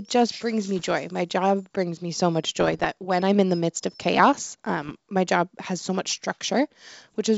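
Bit errors on an ADPCM link strike at 0.79–0.91 s after "just brings me", 2.60–2.92 s before "when I'm in the", 4.82–4.95 s before "my job has so", and 7.02–7.19 s. Each is a pop and rough burst with brief level jumps that rings on as the decoder's predictor recovers. That lingering roughness, rather than a clean gap, separates these from dropouts. The G.722 wideband coding underneath sounds clear up to about 7 kHz.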